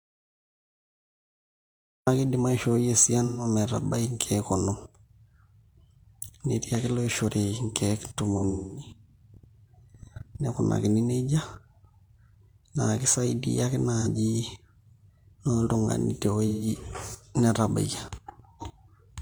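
The input was likely disconnected or muted while the recorder kept writing silence. This audio dropout to silence runs from the start to 2.07 s, so the speech begins from dead silence with no room tone. Lost AAC frames were concealed from the last good spectrum. The result is smeared, phasey patches at 3.25 to 3.44 s (about 128 ms missing), 8.37 to 8.89 s (about 256 ms scattered, longest stretch around 200 ms), 14.00 to 14.07 s (about 43 ms, fitting a single frame) and 16.48 to 16.67 s (about 128 ms).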